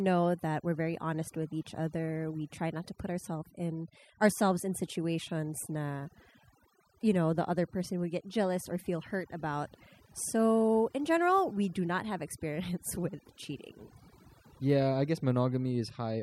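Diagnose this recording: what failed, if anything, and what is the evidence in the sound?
From start to finish, the gaps between phrases fall to near silence, broken only by small twinkling specks. This is overdone noise removal, a fault in the call-processing stage. A noise reduction stage set far too aggressively pulls individual frequency bands down or out whenever they sit close to its noise estimate. The quieter parts of the voice get swept away along with the noise, and leftover isolated bands flicker as those specks.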